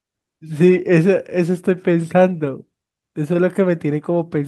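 Nothing to flag in this short speech recording: no technical faults turn up anywhere in it.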